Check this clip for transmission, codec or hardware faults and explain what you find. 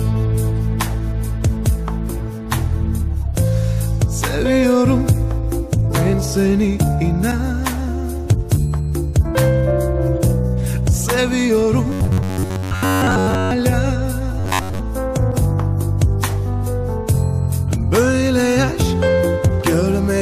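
Robotic sound from repeated short buffers appears twice, at 11.90–13.52 s and 14.40–14.79 s. Audio likely arrived too seldom, so short segments of about 11 ms were replayed over most of the signal, producing a rigid, metallic 94 Hz buzz.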